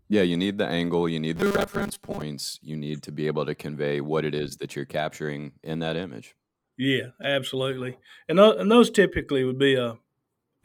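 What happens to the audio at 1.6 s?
The speech turns into a rigid, metallic 200 Hz buzz from 1.36 to 2.22 s: robotic sound, likely from roughly half the audio being replaced by repeated 5 ms buffers.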